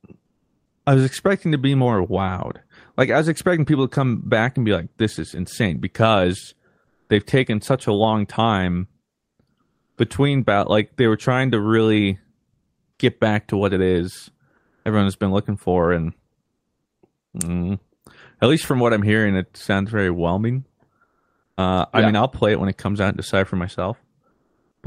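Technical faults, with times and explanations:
0.25–0.85, 6.87–7.09 (after "is insane because"), 9.61–9.97, 12.53–12.99, 14.57–14.85, 16.45–17.01, 21.03–21.57, 24.31–24.83 s: comfort noise in place of the background. In these pauses the real room sound becomes a flat, featureless hiss, likely synthesised by the receiver during Opus discontinuous transmission. It is mostly a few dB quieter, about 17 dB quieter at 12.53 s, and about 10 dB louder at 6.87 s.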